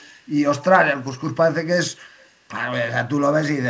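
From 0.00 to 0.29 s a faint echo leak repeats the speech 231 ms late, likely a canceller miss: a discrete copy, not reverberant smear.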